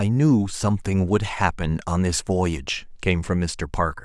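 No technical faults are audible.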